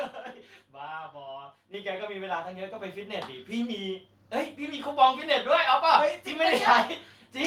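At 1.74 s the whole speech signal, voice and background together, jumps abruptly louder by about 8 dB, then at 2.76 s rises again by about 3 dB. This is the microphone volume stepped up: the device's input gain was raised in single steps.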